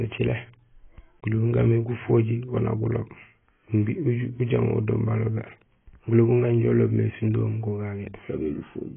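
The clip is speech with AAC compression damage throughout. Nothing is heard above 3.4 kHz, so it sounds dull and smeared. Sibilants warble and fizz. The damage is heavy, likely from AAC-LC at a very low bitrate, around 16 kbps.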